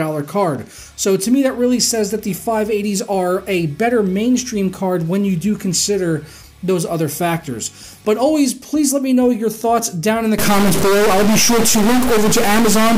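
From 10.38 s to the end, the audio turns harsh and buzzy with a strong noise bed, likely a stuck bit, with errors of about -10 dBFS. The waveform looks blocky and offset-stepped, and the spectrogram shows broadband smearing, filling the quiet gaps too.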